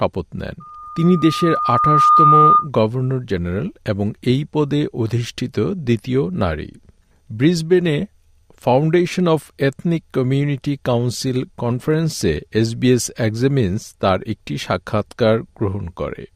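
Loudspeaker feedback squeal from 0.6 to 2.69 s: a microphone is picking up the loudspeaker it drives, and around 1.2 kHz the loop returns more signal than it sends, so that frequency reinforces itself on each pass. It swells over about a second and a half into a piercing single tone that ends up roughly 10 dB louder than the surrounding sound, then cuts off at 2.69 s as the loop is broken.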